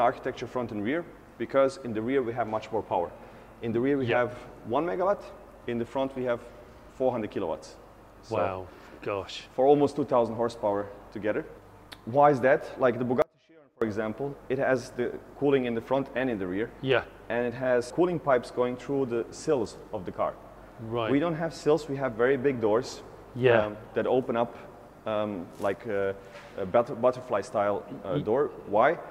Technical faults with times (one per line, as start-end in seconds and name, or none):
13.22-13.82 audio dropout to a faint residue